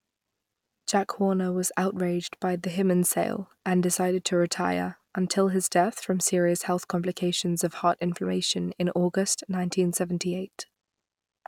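No faults detected anywhere in the speech recording.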